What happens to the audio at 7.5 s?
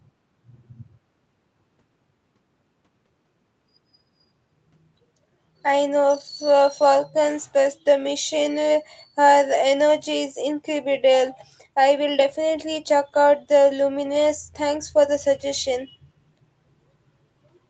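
Nothing goes wrong at 7.5 s: the speech carries on intact through the call path, with only the ordinary band limit of the call, nothing above about 8 kHz.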